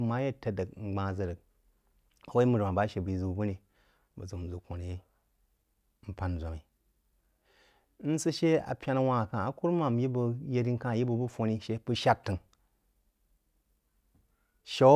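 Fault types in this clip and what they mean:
No technical faults can be heard anywhere in this speech recording.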